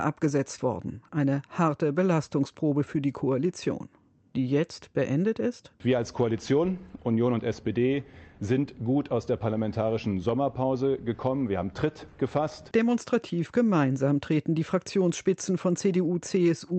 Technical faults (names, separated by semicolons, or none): none